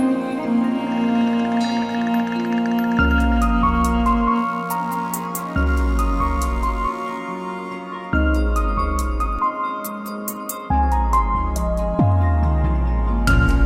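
From 1.90 s to 7.19 s there is computer activity noise: a buzzing, chirping layer pulsing at around 70 Hz, sitting roughly 35 dB below the signal. Changing processor or graphics load disturbs the ground the audio circuit shares, so the noise tracks machine activity, not the audio.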